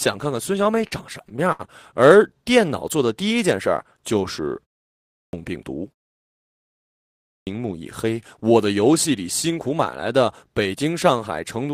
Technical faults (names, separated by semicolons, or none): repeated stalls (stutter); clipped start after a pause